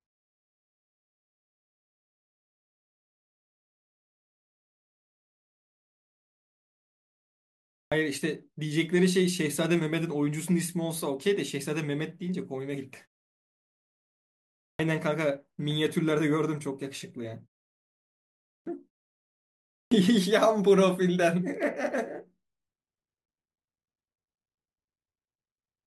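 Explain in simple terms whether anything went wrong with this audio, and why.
Something did go wrong: the speech has a clipped start after a pause. At 7.76, 14.66, 18.52 and 19.78 seconds, speech resumes after silence but its first 130 to 160 milliseconds are missing, so words pop in abruptly without their opening sounds. The playback device dozes off during quiet stretches and wakes too late. Muted pauses alone would only hush the gaps and bring the sound back in time. Here, the speech itself is cut.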